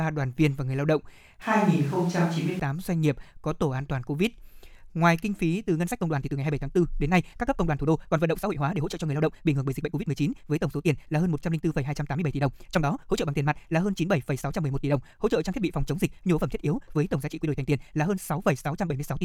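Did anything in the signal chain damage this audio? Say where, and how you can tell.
Yes. From 1.42 to 2.60 s the speech turns roomy and hollow, with thinner bass and room noise roughly 25 dB under it. The level barely changes. Entry and exit are abrupt. This is a switch to a distant microphone, likely at the input stage.

From 5.65 s to the end, the pace jumps to 1.66 times normal while pitch holds steady. The speech sounds rushed. This is a time-stretched section, likely from editing software dropping short slices to shorten the audio without shifting pitch.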